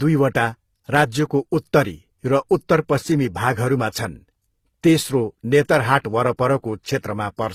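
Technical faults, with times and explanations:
Throughout: transcoding between lossy codecs. Nothing sounds above 15.7 kHz. Two sets of coding artefacts overlap in the speech. They point to a low-rate HE-AAC stage near 20 kbit/s, likely re-encoded through Opus near 48 kbit/s, which spent bits copying earlier errors.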